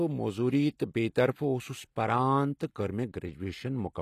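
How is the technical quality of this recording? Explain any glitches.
The recording has plainly audible codec damage throughout the speech, and nothing reaches above 14.9 kHz. Throughout, the treble likely comes from HE-AAC compression: the lower spectrum is coded and the top is rebuilt by copying lower bands upward, which fits a low bitrate around 24 kbps. Unlike a simple low-pass, treble is present but synthetic, its harmonics misaligned, so s sounds turn gritty or lispy.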